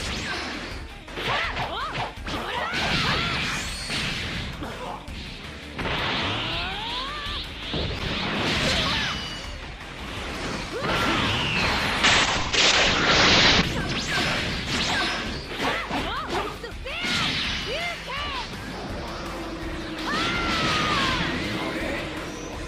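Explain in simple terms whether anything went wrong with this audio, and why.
From 12.05 to 13.69 s the sound turns rough and muffled: a call bitrate drop, where a weakened connection forced coarser encoding that dulled everything above 8 kHz.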